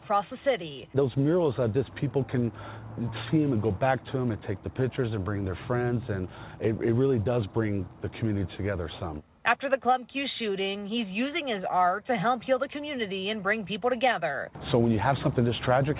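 No technical faults can be heard anywhere in this clip. The sound is band-limited with nothing above 4 kHz, which fits a narrowband call path such as G.711 mu-law at 64 kbps.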